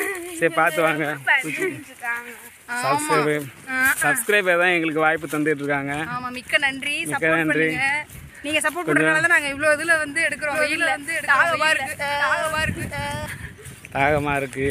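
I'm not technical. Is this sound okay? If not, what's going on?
No. From 10.52 to 13.26 s there's a doubled audio track. A slightly quieter copy trails about a second behind, likely from a second, delayed capture.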